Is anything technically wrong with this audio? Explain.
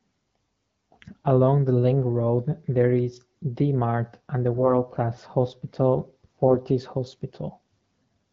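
Yes. AMR bit errors are audible from 4.54 to 4.74 s, right after "and the." Over this stretch, around one bit in twenty arrived flipped in the less protected parts of the AMR frames. The checksum on the critical bits still passed, so the decoder played the frames as valid. Misplaced excitation pulses and skewed pitch, gain and spectral values make the sound turn hoarse, scratchy and gargly for about 0.2 s, while broad pitch and level hold. The length points to roughly nine frames being hit. This all sits within a wideband (HD Voice) AMR-WB stream that fits a 12.65 kbit/s mode.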